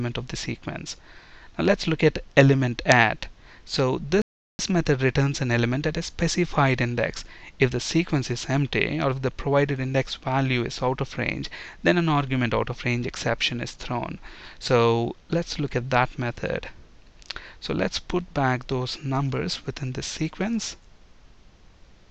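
At 4.22 s the sound just cuts out mid-flow and stays silent until 4.59 s, a gap of about 370 ms. That's a playback stall: the player likely starved of data or had its thread blocked, so output went dead until it caught up.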